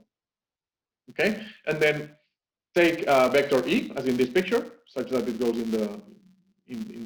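From start to finish, a filter restarted on every block resets its state and begins each block from silence, leaving a small tick at every boundary. The ticks fuse into a buzz at 172 Hz, which fits a 256-sample block. Unlike steady mains hum, this buzz rises and falls with the sound's level.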